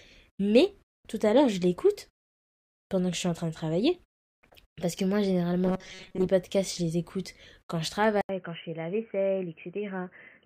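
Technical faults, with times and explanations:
5.65–6.28 s, robotic sound from repeated short buffers: For roughly 0.6 s the speech becomes a rigid, metallic buzz pitched at 188 Hz, though its rough contour survives. The likely cause is audio arriving too seldom, with playback filling the gaps by looping the most recent fragment. The period of the buzz fits a repeated slice of about 5.3 ms. Around half of the material in this stretch is repeated, so the corresponding real audio is skipped.
8.21–10.46 s, input switched to a poorer device: An 80 ms silence marks the switch, after which the sound stays dull and boxy to the end. The level drops by about 5 dB, and a new noise floor appears, roughly 55 dB below the signal. This pattern most likely comes from the recording moving mid-clip to a narrower-band input, such as a headset's call profile, which brings its own tone, gain and background noise.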